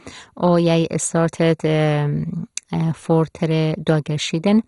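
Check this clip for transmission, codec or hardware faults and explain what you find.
There's one fault, and it runs through the whole clip: heavy MP2 compression damage on the speech. Nothing comes through above about 11.2 kHz, so it sounds dull, with a gurgling, grainy edge on the voice. That's likely a low-rate MPEG Layer II encode, around 56 kbps from the sound of it. With that few bits the encoder shuts off the upper sub-bands and quantises the remaining ones coarsely, so bands flicker in and out.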